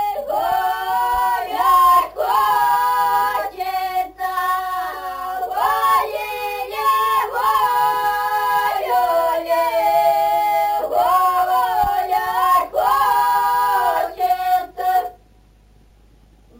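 A bright, metallic fizz rides on the sound from start to finish, rising and falling with its level, about 20 dB below it and concentrated between 8 and 16 kHz. This is imaging from sample-and-hold upsampling: each sample was simply repeated, without smoothing, when raising the rate, which fits a 16 kHz source taken to 44.1 kHz, leaving mirrored spectral copies above the original band.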